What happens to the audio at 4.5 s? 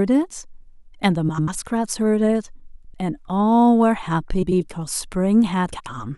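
A brief garbled flutter breaks the speech from 4.42 to 4.61 s. This is frames out of order: two adjacent blocks of about 93 ms each were swapped and decoded in that order, so the passage plays with its halves exchanged and no time is lost.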